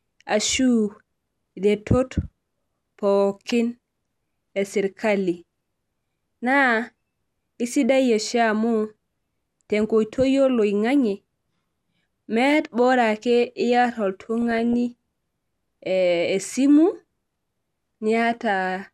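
DAB burbling at 14.42 to 14.74 s in this speech clip: bit errors from weak reception slipped past error correction, corrupting MP2 audio data so sub-bands blip with noise or jump in level.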